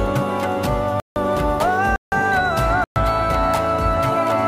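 Three blocks of digital silence cut the sound out without fades, at 1.00–1.16 s, 1.96–2.12 s and 2.84–2.96 s.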